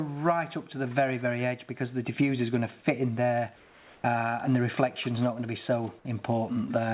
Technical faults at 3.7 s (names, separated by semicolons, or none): comfort noise in place of the background